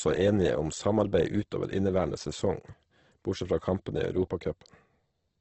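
A speech clip with heavy codec damage throughout. Nothing is heard above 8.3 kHz. The sound is rough, grainy and noisy rather than swirly. This is likely Opus compression in its music mode, band-filling at a low rate, which fits about 12 kbps.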